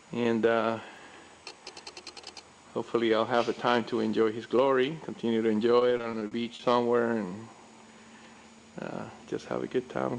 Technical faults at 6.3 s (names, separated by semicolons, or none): repeated packet loss (robotic sound)